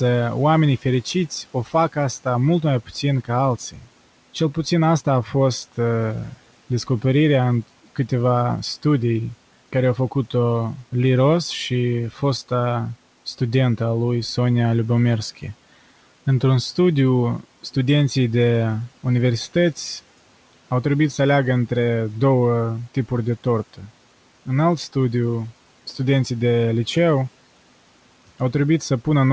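At 1.54–1.74 s, 3.71–3.88 s and 23.74–23.91 s, speech is cut by the noise suppressor. It treats quiet speech as noise and pulls it down by about 9, 12 and 10 dB. Sounds turn faint and swallowed rather than vanishing outright as in a dropout.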